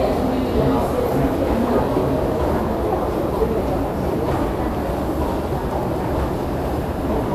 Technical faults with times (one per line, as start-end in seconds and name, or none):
0.00-7.34 Vorbis compression